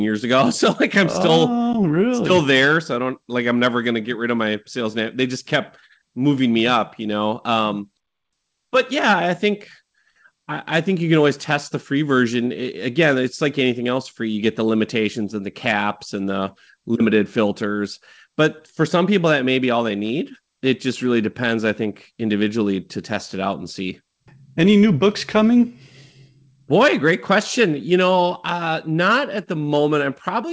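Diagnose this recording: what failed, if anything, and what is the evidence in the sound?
Nothing failed in this speech recording: the band stops at 8 kHz, which fits a wideband call codec such as G.722 at 64 kbps working as designed, and there are no dropouts, clicks or timing disturbances anywhere in it.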